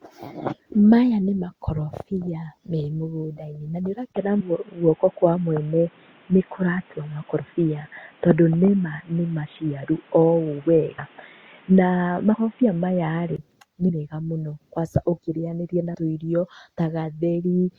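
Right after "na nĩ", at 4.13 s, there's a 20 ms gap and the speech goes dull and boxy. Nothing gets through above 3.8 kHz, the level shifts by a few decibels, and a new noise floor appears well below the speech. That's likely the input switched to a poorer device, something like a headset's call profile. It clears up again at 13.38 s, just before "nĩ mega mũno kwanca".

There are also three spots where compressed frames were skipped. At 10.98 s roughly a tenth of a second goes missing. At 13.88 s, right before "mega mũno kwanca ũkĩrĩnyanĩria", a bit less drops out. At 15.94 s, after "mũno kwanca ũkĩrĩnyanĩria na", about a tenth of a second is lost. At each one the speech jumps ahead.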